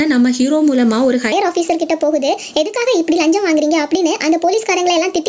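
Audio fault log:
throughout: gain pumping. The gain is pulled down under each loud event, a swing of about 5 dB. Loud and quiet passages sit closer together than they should, giving a squashed, flattened dynamic. The likely cause is input gain set far too high for the microphone, with a fast limiter or compressor repeatedly clamping it down on every peak and releasing in between.
1.32 s to 5.29 s: section at the wrong speed. From 1.32 s to the end, the audio runs at 1.33 times its recorded speed, so everything sounds hurried and sits roughly five semitones higher, with pitch and tempo shifted together. Material before 1.32 s plays at its natural rate. The likely cause is this portion being played or edited against the wrong clock. The call-style band limit, with nothing above 8 kHz, is unaffected.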